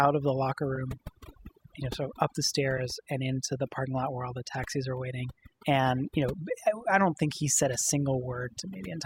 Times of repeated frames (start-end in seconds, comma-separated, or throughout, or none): 0.75-0.78, 2.77-2.80